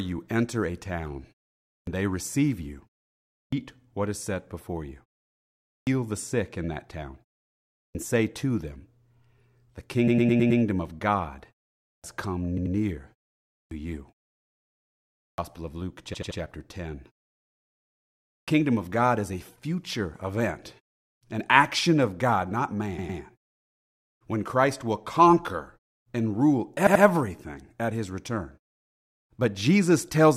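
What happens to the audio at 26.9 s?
From 26.86 to 27.03 s there are repeated frames. A block of about 85 ms of compressed audio, which fits a run of four frames, plays twice more, adding about 171 ms. It sounds like a stutter. A waveform or spectrogram shows the identical pattern repeated.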